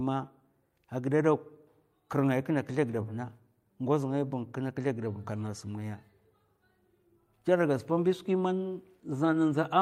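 No technical faults can be heard anywhere in the recording; the signal holds steady throughout with no audible disruption.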